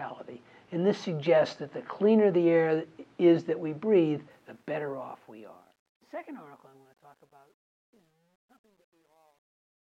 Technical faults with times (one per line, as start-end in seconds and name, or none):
4.30-9.87 truncation distortion on a fade